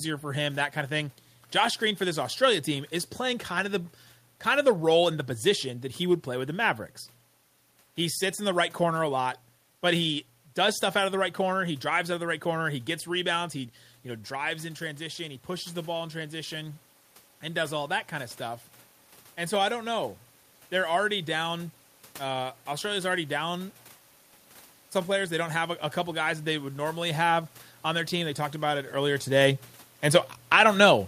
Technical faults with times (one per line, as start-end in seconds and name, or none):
12.23-18.68 automatic gain rising